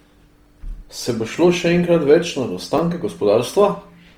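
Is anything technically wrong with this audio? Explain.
Yes. Throughout the speech there is a grainy, rough texture where clean tone should be, with plainly audible damage even though the bandwidth stays full, reaching about 20.2 kHz. This is likely Opus compression in its music (CELT) mode, at a rate that sounds like about 24 kbps, filling starved bands with folded or noise-like energy.

There is also a repeated buffer at 1.37 s, just before "še enkrat več nad", and again at 2.78 s, just after "še enkrat več nad". Each sounds as a tiny click-like stutter. A short slice plays twice with a hard join because fresh audio arrived late. The length fits a 10 ms buffer, and about 10 ms of real audio is lost each time.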